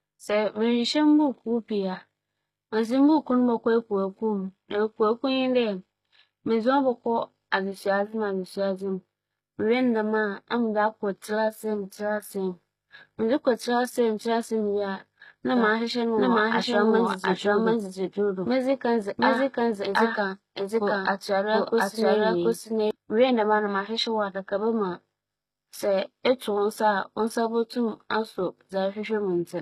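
From start to finish, the speech has plainly audible codec damage, likely from HE-AAC compression. The treble is not genuine. It is copied up from lower bands and shaped only coarsely, so its harmonics do not match the true ones. S sounds come out gritty and metallic. Nothing is present above 14.9 kHz. The degree of damage points to a low bitrate, around 20 kbps.

From 15.57 to 22.91 s, a doubled audio track appears. A second full-band copy of the speech runs roughly 0.7 s behind the first, at about the same level. It has no decay or room colour, so it sounds like a stacked duplicate, not an echo. It cuts in and out abruptly at those times. The likely cause is a second capture through a slower path, or an edit that left two copies out of step.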